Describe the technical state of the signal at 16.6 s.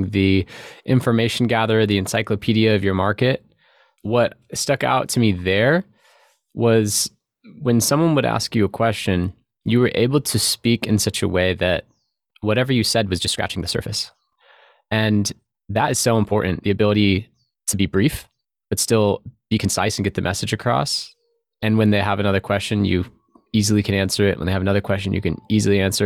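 A time-stretched section runs from 12.77 to 19.95 s, after "a way that whatever". Speech jumps to about 1.35 times pace at unchanged pitch, sounding rushed, likely from pitch-preserving compression dropping short slices.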